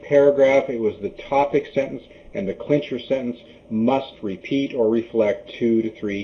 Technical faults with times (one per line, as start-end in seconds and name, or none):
0.00-6.23 channel delay (comb filtering)